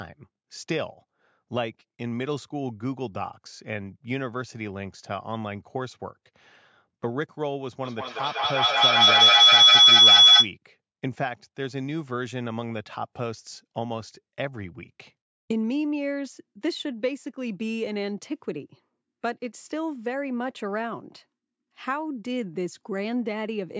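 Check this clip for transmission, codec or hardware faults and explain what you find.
A feedback howl runs from 7.85 to 10.55 s. The call's microphone-to-loudspeaker loop gains level each trip, so the repeats swell into a tone near 3 kHz, peaking about 15 dB above the speech, with the loop coming round about every 0.2 s.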